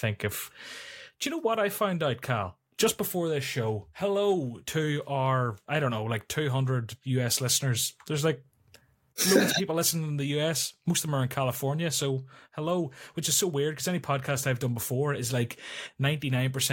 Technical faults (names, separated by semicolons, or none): none